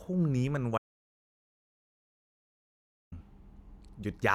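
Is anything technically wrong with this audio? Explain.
Yes. From 0.78 s to 3.12 s there is an audio dropout to silence. The input feed was likely lost while writing continued, so about 2.34 s of the speech was replaced by silence. The speech cuts out abruptly into dead silence with no room tone, then resumes mid-flow.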